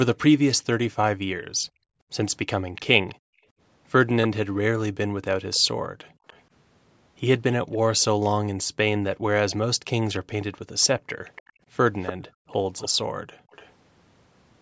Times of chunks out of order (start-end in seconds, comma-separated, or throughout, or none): none